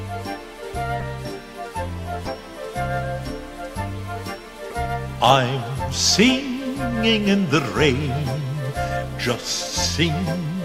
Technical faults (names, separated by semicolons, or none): corrupt frame decoded